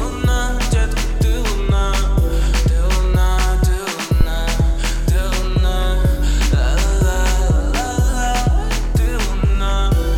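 At 4.21 s a deep, abrupt thump cuts through the sound and is over by about 4.26 s, peaking around 2 dBFS, which is past full scale. Its tail dies away within roughly 12 ms. This is a phantom power thump: a supply switched on or off on a live input sends a sudden DC step through the coupling capacitors, and that step reaches the output as a low-frequency pulse.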